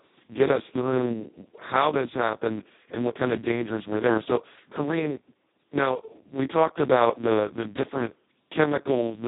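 Throughout, the speech has been squeezed through the Speex codec at its lowest quality, which fits a bitrate near 2 kbps. Too few bits remain to describe the excitation, so the voice turns hoarse, noisy and robotic, and nothing is left above 3.9 kHz.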